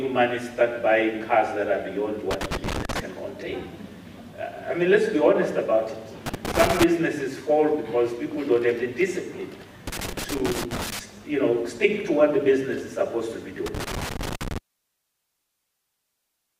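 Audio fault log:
2.31 to 3.00 s, 6.26 to 6.84 s, 9.87 to 10.99 s and 13.66 to 14.58 s, loose connector crackle: a poor contact keeps making and breaking, chopping the signal into irregular scratchy bursts; the waveform shows jagged dropouts and spikes, the spectrogram scattered full-band vertical streaks.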